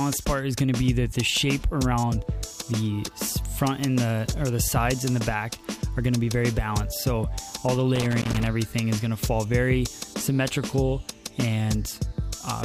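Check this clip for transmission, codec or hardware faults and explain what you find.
One hardware fault shows up. Loose connector crackle runs from 7.95 to 8.47 s: a worn or dirty contact repeatedly breaks and remakes the signal path for about half a second, chopping the audio, heard as an irregular burst of scratchy crackle.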